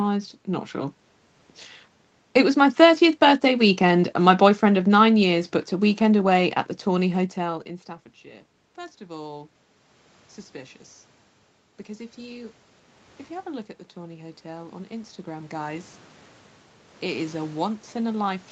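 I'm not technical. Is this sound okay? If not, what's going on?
No, not quite. From about 12.15 s to the end there's automatic gain rising. The call's level control decides the speech is too quiet and gradually turns it up, so the voice and the room noise behind it swell louder together instead of staying steady.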